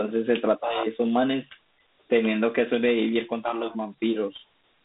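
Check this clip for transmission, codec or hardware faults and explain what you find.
There's one fault, running through the whole speech clip: Dialogic VOX ADPCM coding. Each sample is squeezed into a 4-bit adaptive step, which fits a 32 kbps telephony stream, so a gritty hiss rides along with the speech, and there's nothing above 3.8 kHz.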